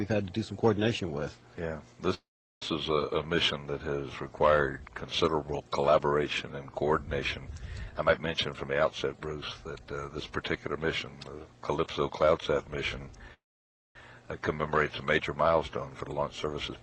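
At 2.14 to 2.62 s there's a call audio freeze: the last sound trails off into about 380 ms of silence, likely because packets stalled and the jitter buffer ran dry. Nothing's lost; the audio just resumes late. From 7.79 to 10.78 s a jitter buffer speed-up trims tiny pitch-period slices, running at 114% speed to shed roughly 0.4 s of backlog, so it sounds rushed but keeps its pitch. Another freeze hits at 13.34 to 13.96 s, with about 560 ms of silence. A second speed-up at 16.00 to 16.77 s runs at 111%, dropping around 0.1 s.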